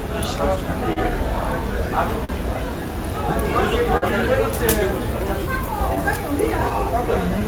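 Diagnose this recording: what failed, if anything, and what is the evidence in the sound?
Network stage, with timing failing across the whole clip: clock drift between sender and receiver. The sending device's clock runs slow, by something like 3 percent, so audio arrives a little slower than the receiver plays it out. The jitter buffer keeps draining and the receiver has to pad or adjust repeatedly. The result is small, irregular timing hiccups scattered through these everyday sounds rather than one clean break.

Three short stalls from a late packet, also network and jitter buffer: 0.93 to 0.99 s, 2.24 to 2.32 s, and 3.97 to 4.05 s. Each time the next packet missed its deadline, the buffer ran dry and the receiver held the last sound, for 38, 44 and 49 ms, then resumed where it left off. Nothing is lost, but each event is briefly frozen with a slight buzz or dip.

Scattered short gaps between 5.66 and 7.43 s, again a network fault. 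Around four separate packets went missing or arrived too late across this stretch, and the receiver bridged each one by extending the preceding audio. The patches add up to roughly 50 ms, and the longest is only about 15 ms. They are heard as quick ticks or small smears rather than dropouts.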